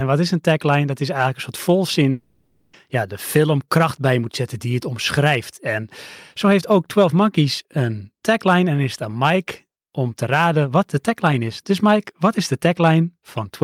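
A long network dropout runs from 2.11 s to 2.75 s. For about 0.62 s the speech gives way to a smeared, buzzy continuation of the last sound that fades without reaching silence, likely because packets stopped arriving and the receiver filled the gap with concealment.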